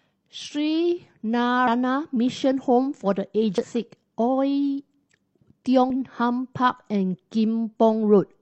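Speech with damaged data in a compressed stream at 1.63–1.68 s, 3.58–3.65 s and 5.90–5.94 s: corrupted frames make the decoder lose sync and output brief glitches, seen as short vertical broadband smears and abrupt waveform discontinuities.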